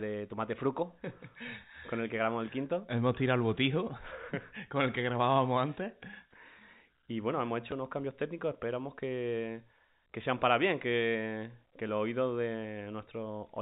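At 7.71 s the speech catches in a small blip. This is packet loss with the last packet repeated. About 10 ms of audio went missing, which fits a single lost packet. The receiver filled the gap by playing the previous packet again. It is too short to build into a buzz. The narrow G.711 telephone band carries through it unchanged.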